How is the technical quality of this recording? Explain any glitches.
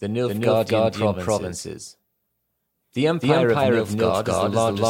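The recording has one clear fault. A doubled audio track runs throughout: a second, equally loud full-band copy trails by roughly 0.3 seconds, likely from a slower capture path, giving a dry stutter with no decay or room colour.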